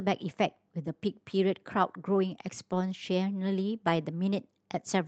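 At 2.71 to 2.73 s, a lost packet rebuilt from error correction: one 20 ms packet went missing, and the decoder substituted the lower-bitrate redundant copy carried in the next packet. There is no dropout, just a brief rougher, noisier patch in the speech, heard through an Opus call path whose band ends around 8 kHz.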